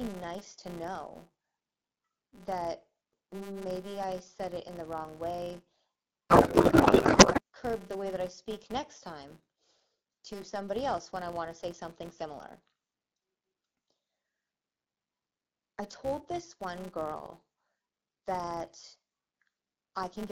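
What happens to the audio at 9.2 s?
At 9.2 s, as across the whole clip, a filter restarted on every block is heard. The filter drops its memory at each block boundary and starts again from silence, so every block opens with a small click. These repeat about 200 times a second, which fits 5 ms blocks, forming a steady 200 Hz buzz that rises and falls with the speech level, riding over the light coding of the AMR wideband (HD Voice) codec.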